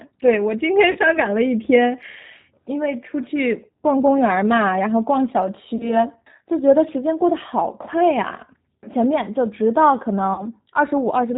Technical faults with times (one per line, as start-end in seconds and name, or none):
0.00-11.37 G.729 codec
0.91-0.98 VoIP packet loss concealed by the speech codec
5.76-5.97 VoIP packet loss concealed by the speech codec
10.34-10.43 VoIP packet loss concealed by the speech codec